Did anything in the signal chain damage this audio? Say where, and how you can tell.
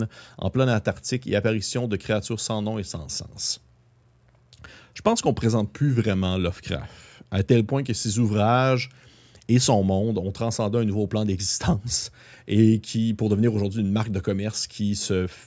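No, no stage of the signal chain has left any audible damage on this speech recording. At no point does the sound carry a trace of the wiring, conversion, processing, transmission or playback it passed through.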